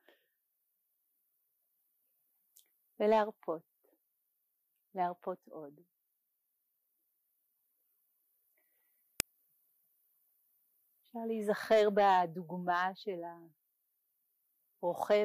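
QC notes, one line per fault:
9.20 s, uninitialised buffer: a block was played before audio was written into it, so leftover memory came out as a loud crack, fitting a 64-sample buffer.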